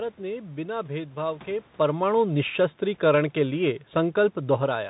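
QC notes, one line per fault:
Throughout: Bluetooth CVSD headset codec. Narrowband one-bit coding, consistent with a 64 kbit/s stream, cuts everything above 3.8 kHz. The spectrogram shows a hard ceiling there, with scratchy s sounds and a granular hiss floor.
1.79–4.85 s: automatic gain falling. The gain control eases the level down by about 5 dB. The waveform envelope shrinks steadily, and the background noise sinks with it.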